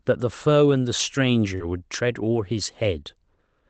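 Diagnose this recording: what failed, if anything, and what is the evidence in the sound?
Lost packets rebuilt from error correction, at 0.71–0.73 s, 0.99–1.01 s, 1.60–1.62 s, 2.18–2.20 s and 2.34–2.36 s. This is a network fault, recovered at the codec. Each event is a single 20 ms frame where the speech turns briefly rougher and noisier but never drops out. The following Opus packet carried a low-bitrate redundant copy of the lost one, and the decoder played that coarser copy instead of leaving a hole.

Short concealed packet loss, 1.55–1.62 s, also at the network stage. About 40 ms of speech never arrived in time, and the receiver filled roughly 41 ms by extending the last sound, continuing its pitch or shaping noise, before blending back. This is heard as a brief smear or wobble. The tail of the gap overlaps the rebuilt frame at 1.60 s, so the repair hands over from guessed audio to the coarse copy. 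Throughout, the audio stops at about 8 kHz, as expected from the call codec.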